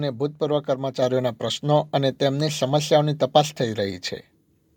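At 1.02 s the speech and background jump louder together by about 4 dB: a microphone volume stepped up, the call software raising the input gain in one step.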